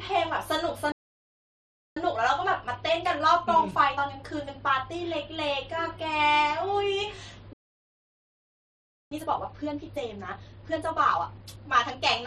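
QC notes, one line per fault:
0.92–1.97 s and 7.53–9.11 s, playback stall: the speech cuts off mid-flow into silence for about 1.04 s, then 1.58 s, before resuming. The likely cause is the player running dry of buffered data or its thread being blocked, so output halted until recovery.
1.97–4.97 s and 9.11–12.11 s, time-compressed catch-up: right after each stall the speech sounds rushed yet keeps its normal pitch. The player is shedding its backlog by cutting out small slices and cross-fading the joins, running at 1.15x, then 1.5x.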